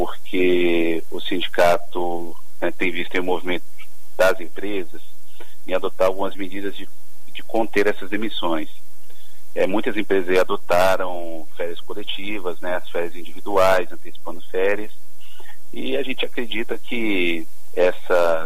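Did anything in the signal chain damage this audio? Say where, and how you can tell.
Yes. A DC offset runs through the whole clip, most likely from the converter or analogue input stage, where a constant bias voltage added to the signal. The waveform sits displaced from zero by about -16 dBFS, showing as a steady 0 Hz component and eating headroom on one polarity.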